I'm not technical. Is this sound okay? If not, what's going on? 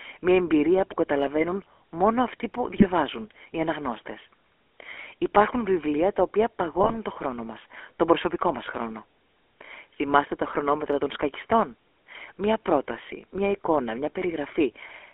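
No. The whole clip passed through the GSM full-rate codec, an old mobile-phone coder, so the speech sounds thin, muffled, buzzy and gravelly throughout.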